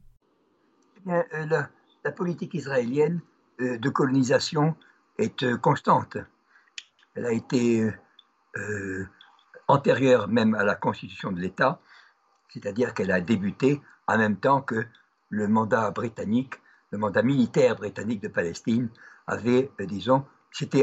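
No technical faults are audible.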